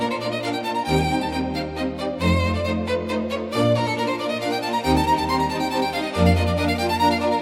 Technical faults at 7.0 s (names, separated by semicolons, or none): none